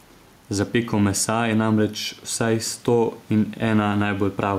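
Gain pumping runs right through the speech, with the gain swinging by around 5 dB under each loud syllable, likely from a fast limiter reining in a mic gain set far too high; the room noise sits about 35 dB down.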